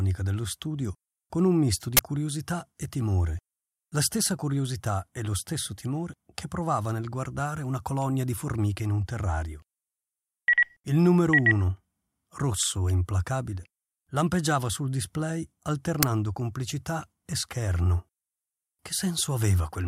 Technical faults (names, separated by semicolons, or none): uninitialised buffer